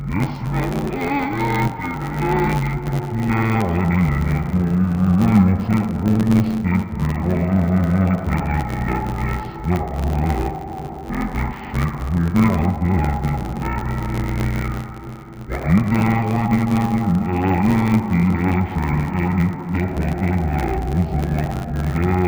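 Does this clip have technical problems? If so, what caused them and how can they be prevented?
Yes. Throughout the clip the sound is dull and robotic, with a steady buzz at about 93.8 Hz and no clear octave drop. That is interleaved audio read as planar. Each 10.67 ms block of alternating left/right samples is split into halves and played as if separate channels, which fits a 512-sample buffer. Unlike a sample-rate mismatch, the pace is correct and the pitch doesn't move. The buzz tracks the block rate. Prevent it by declaring the buffer layout correctly, as interleaved or planar, wherever audio passes between components.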